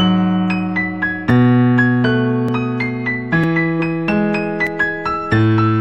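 At 1.3, 2.49 and 3.44 s the sound jumps forward, each time losing roughly a fiftieth of a second, and at 4.67 s there is a bigger skip of several times that. None of them has any silence. This is likely a dropped buffer (overrun): the samples weren't read before the hardware overwrote them, so the audio on either side was spliced directly together.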